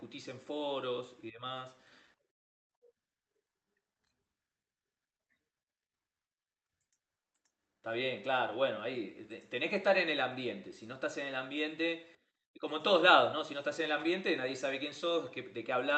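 No technical faults can be heard in this speech recording. It has passed through a WebRTC call path, where the high frequencies stop at around 8 kHz, which fits an Opus codec running at a wideband setting.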